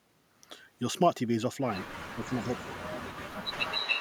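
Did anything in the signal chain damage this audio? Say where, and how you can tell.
Yes. From 2.07 to 3.19 s the speech dips and breaks up, sinking by roughly 25 dB at its worst, with about a second affected in total. This is likely speech suppressed in double talk: the call processing's echo canceller muted the talker while both sides spoke.

From 3.51 s to the end, a copy of the speech returns 283 ms late, about as loud as the original. This is likely an echo leak in call processing: a loudspeaker's sound reached the far microphone, and its echo canceller failed to remove it.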